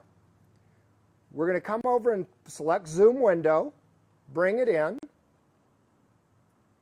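At 1.81 s the sound breaks for about 31 ms, and again at 4.99 s for about 44 ms: each is a gap at a join of encoded pieces, where separately encoded segments were butted together with their encoder start-up delay and last-frame padding left in. Unlike a dropout, nothing is missing; the sound resumes exactly where it broke off, and the silence's edges are softened by the codec rather than clicking.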